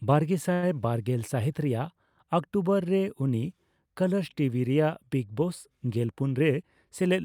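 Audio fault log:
0.53–0.64 s: short stall from a late packet. A packet arrived late and the jitter buffer ran dry, so the receiver stretched the last sound for about 90 ms before carrying on where it stopped. Nothing is lost, but one sound hangs on too long with a slight buzz or dip. On a spectrogram the harmonics run flat and repeated across that stretch, and the waveform shows near-identical cycles.
5.96–6.86 s: jitter buffer speed-up. Too much audio had built up in the buffer, so the receiver trimmed many short pitch-period pieces in a row, removing roughly a tenth of a second. Playback runs at 110% speed with unchanged pitch and sounds hurried. A spectrogram shows compressed syllable timing with steady harmonic spacing.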